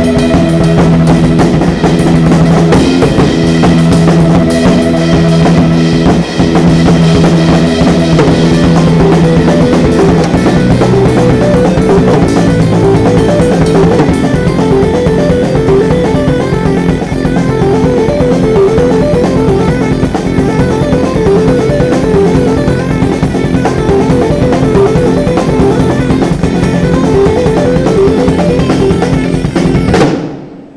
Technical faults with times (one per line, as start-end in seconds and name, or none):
none